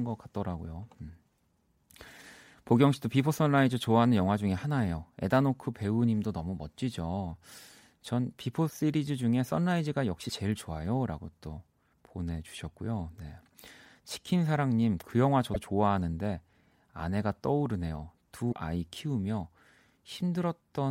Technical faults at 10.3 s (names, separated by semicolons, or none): broken MP3 bit reservoir